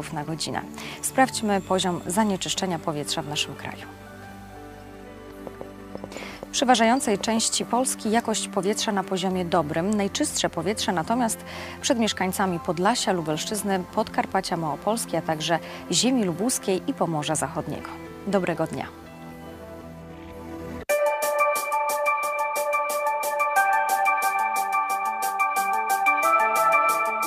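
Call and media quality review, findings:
Train of clicks, 5.47 to 7.64 s. About ten similar pops, uneven pace near 5 per second, above the sound. Likely interference, faulty connection or power supply.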